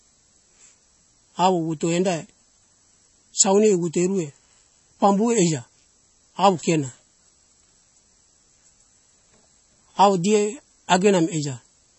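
Throughout, nothing is heard above 8 kHz and the speech sounds watery, with swirling as weak components drop in and out: likely MP3 compression, starved at roughly 32 kbps.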